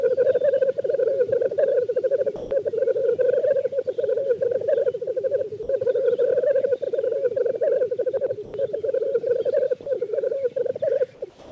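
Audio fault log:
2.36–2.51 s, 5.63–5.69 s, 8.45–8.54 s: sound dropped by the voice detector. Sound gives way to steady noise for 150, 60 and 90 ms, likely because the detector mistook it for background. On a spectrogram these appear as flat, featureless patches, and on the waveform as brief, even-level stretches.
11.30 s to the end: comfort noise in place of the background. The detailed background becomes a smooth synthetic hiss about 5 dB quieter, likely from discontinuous transmission. The spectrogram turns uniform and the waveform drops to a lower, flat envelope.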